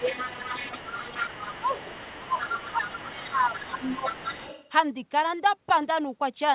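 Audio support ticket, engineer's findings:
Speech suppressed in double talk at 0–0.09 s, 0.51–1.8 s and 2.16–4.23 s. Dips of about 10–15 dB, likely echo-canceller over-suppression. Visible as envelope notches in the waveform and faded bands in the spectrogram.

Other side's voice leaking through, 0.05–4.69 s, about 15 dB below the talker. Likely residual loudspeaker echo. Faint second harmonic pattern under the main speech, with everything capped at 4 kHz, as expected for a G.711-type call path.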